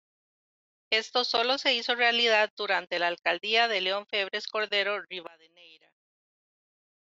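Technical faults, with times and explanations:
5.27–7.19 s: the speech falls about 28 dB, likely from one channel inverted, which cancels the shared centre content when summed to mono.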